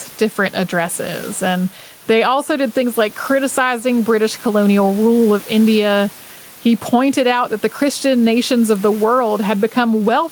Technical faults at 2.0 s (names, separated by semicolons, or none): gain pumping